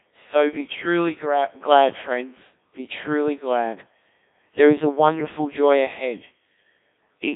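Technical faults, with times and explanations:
Throughout: Codec 2 vocoder, heavy damage. The speech sounds robotic and buzzy because the decoder rebuilds it from sine waves using only pitch, voicing, energy and a spectral envelope, which points to about 1.3 kbit/s. Nothing remains above 3.8 kHz. Unlike ordinary band-limiting, the waveform itself is resynthesised, not merely filtered.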